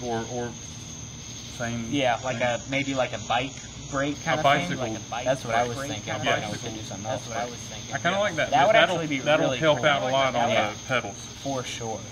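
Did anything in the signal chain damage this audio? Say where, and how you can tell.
Yes. At the network stage, an adaptive stream at a lower bitrate switched in from 2.15 to 4.15 s. Treble vanishes above 11.8 kHz and artefacts rise, consistent with a drop to low-bitrate HE-AAC.

From 4.38 to 10.60 s there is a doubled audio track: a full-band copy about two seconds behind and about 5 dB quieter, starting and stopping abruptly. The likely cause is a second capture path or misaligned edit.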